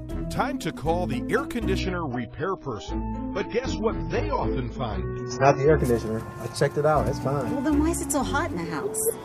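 From 1.79 to 5.79 s the audio drops abruptly, with no gap, to an adaptive stream at a lower bitrate. Everything above 7 kHz vanishes and artefacts thicken, which fits a very low-bitrate AAC rendition.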